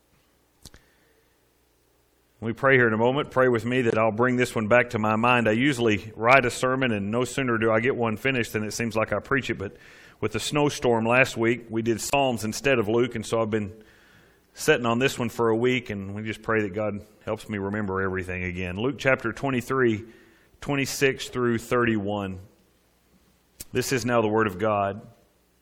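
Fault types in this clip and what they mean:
Corrupt frame muted: at 3.90 s and 12.10 s the sound cuts abruptly to silence for about 44 ms and 35 ms, each gap fitting one rejected compressed frame replaced by silence. The waveform shows flat-line holes, the spectrogram sharp vertical blank strips, and timing stays intact.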